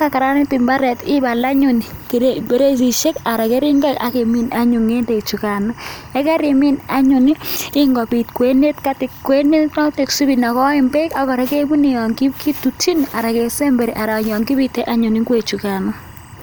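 Timecode bleed runs under the speech from start to finish: 24-frame code leaking in about 30 dB down, a faint chirpy warble flipping between roughly 1 and 2 kHz.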